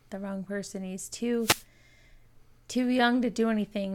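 At 1.39 s a wireless microphone noise hit occurs in the speech for about a quarter of a second, ending at 1.65 s. The radio link from an analogue FM microphone faded as reflected signals cancelled at the receiver, so the receiver's own noise rose up through the audio and is heard as a brief swish of static. Unlike a digital dropout, which leaves a clean gap or repeated fragment, this fault adds hiss.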